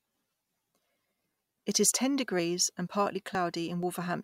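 At 1.92, 2.40, 3.35 and 3.83 s the speech skips forward, each time losing a sliver of about 20 ms, with the two sides butted together. This is audio missing between chunks, likely from half-second processing blocks, and unlike a dropout it leaves no silent gap.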